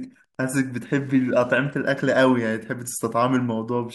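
A faint, steady ticking runs under the speech for the whole clip, about ten clicks each second and sitting far below the talker's level. It is Wi-Fi interference. A Wi-Fi radio near the audio circuitry sends a beacon every 102.4 ms. The circuit rectifies each radio burst into a small audible pulse, so the transmitter's timing becomes a regular tick in the recording.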